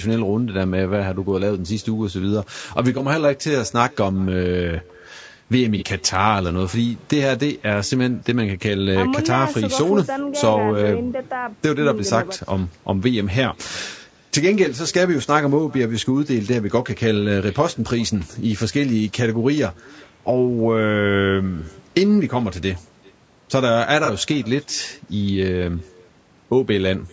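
Echo with no canceller runs through the whole recording. The far end's loudspeaker feeds back into its microphone and nothing removes it, so every phrase is followed, after nearly half a second, by a faint, thin copy sitting about 28 dB below the speech.

Low-delay AAC compression also colours the entire clip, with plainly audible damage. The speech sounds rough and grainy, with noise filling the gaps between harmonics. This is likely AAC-ELD's short frames resolving pitch poorly at a rate that fits roughly 32 kbps. The band also stops at 8 kHz from the call's microphone processing.

AAC frame loss with concealment appears at 5.78 to 5.84 s and again at 24.05 to 24.10 s. Each dropout points to a single lost frame of about 30 ms. The decoder patches it from the last good spectrum, leaving a brief smeared, noisy, phasey blur.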